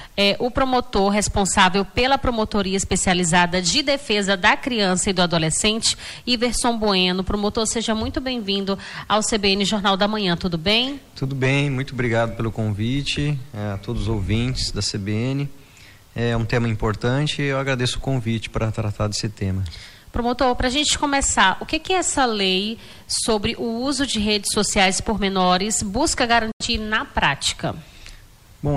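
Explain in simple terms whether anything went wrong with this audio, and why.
Yes, something went wrong near the end. From 26.51 to 26.65 seconds there is a digital broadcast dropout. The receiver lost good data, so it quickly faded to silence and muted. That short hole fits a couple of lost frames. The sound that was sent then is gone.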